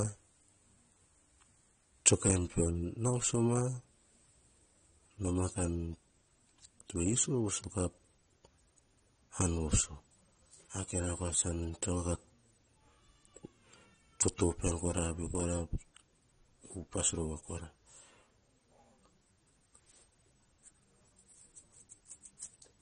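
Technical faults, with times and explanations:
Throughout, AAC compression: the speech sounds dull and smeared, with nothing above 9.8 kHz and a plainly audible warbly, fizzy edge on sibilants. That's likely a low-bitrate AAC-LC encode, fitting roughly 32 kbps, where the encoder drops the top band and starves what's left.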